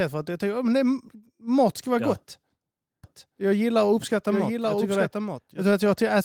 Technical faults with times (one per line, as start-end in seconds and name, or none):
3.04-5.68 doubled audio track